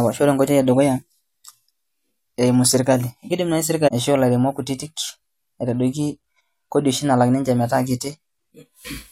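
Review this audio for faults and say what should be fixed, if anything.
At 3.87 to 3.89 s, between "eimu sirkali kidim naai" and "aishoo ilairemok kutitik", the speech jumps abruptly forward with a small click-like blip. This is likely a stream segment skipped: one chunk of the segmented stream failed to load, and the player resumed at the next segment. On a waveform it appears as a sudden discontinuity. On a spectrogram it shows as a thin vertical broadband line, with the energy patterns on either side not lining up. Prevent it by retrying failed segment requests and buffering further ahead before playback.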